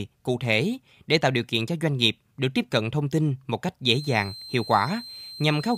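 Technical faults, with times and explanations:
3.91 to 5.77 s, switching supply whistle: a high whistle near 4.1 kHz, wandering slightly between about 4.10 and 4.14 kHz, sits roughly 15 dB below the speech until the end. A switching power supply is cycling within hearing range, and its tone leaks into the audio path.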